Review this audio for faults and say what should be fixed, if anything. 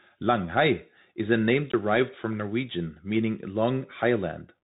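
The Bluetooth CVSD headset codec runs throughout: nothing passes above 3.8 kHz, s sounds turn scratchy and a granular hiss sits underneath. That hiss and slope-overload grit set it apart from plain low-pass filtering. The sound points to the 64 kbps one-bit delta stream behind that hiss and grit, whose adaptive step can't keep up with loud, bright sounds. Recording over a wideband link such as mSBC or LC3, or over a wired microphone, would prevent it.

A block of digital silence runs from 1.72 to 1.74 s, just after "is a name". It is a 20 ms hole of silence with hard edges, rather than a faded dropout or packet-loss concealment. The output buffer was likely left unfilled in time. Giving the audio thread more buffer headroom and a higher priority would prevent it.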